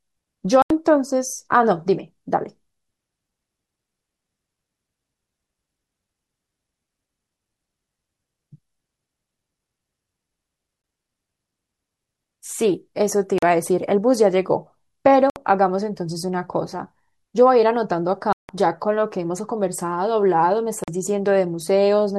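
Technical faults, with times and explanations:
0.62–0.71 s, 10.82–10.84 s, 13.38–13.43 s, 15.30–15.36 s, 18.33–18.49 s and 20.84–20.88 s: Bluetooth dropout. The speech cuts to silence for about 81, 20, 41, 61, 163 and 41 ms, then resumes further along, as though it kept playing through the gap. The lengths step in multiples of roughly 20 ms, which fits whole audio packets that likely failed to reach the headphones in time and were discarded.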